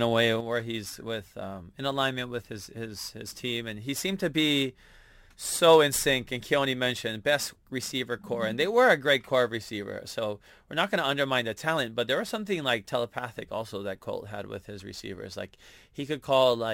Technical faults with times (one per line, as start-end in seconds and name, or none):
0.40-16.74 sudden gain jump